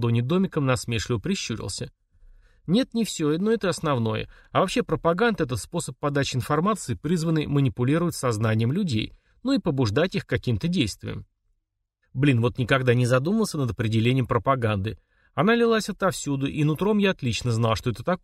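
The audio briefly drops about a semitone and slows by 5.7% from 6.72 to 7.24 s, then jumps a semitone sharp and fast from 12.94 to 13.51 s, likely drift correction steps in clock-matching resampling.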